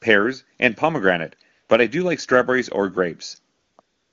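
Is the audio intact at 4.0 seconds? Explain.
No. From 3.81 s to the end of the clip, AMR comfort noise replaces the real background: with speech frames halted, the receiver synthesises a steady, smooth noise.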